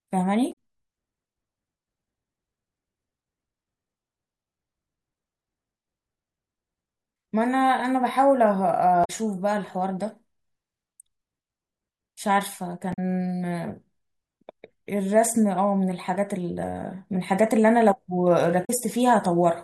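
Damaged data in the compressed stream produces brief glitches at 0.49–0.55 s, 9.01–9.10 s and 12.90–12.99 s, as the decoder misreads frames and hunts for the next header. At 16.01 s a single sharp click is heard, likely from dropped samples: a couple of samples missing, so the waveform steps abruptly between values. The same stream corruption returns at 18.61–18.70 s.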